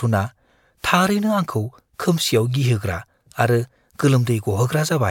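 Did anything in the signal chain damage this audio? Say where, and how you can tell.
No, no stage of the signal chain damaged this speech.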